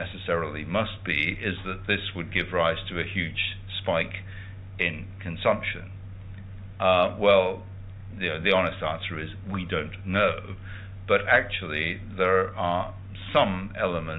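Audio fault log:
No faults are present in this clip. The audio comes through a working call path whose band stops at 4 kHz, which fits G.711 mu-law coding.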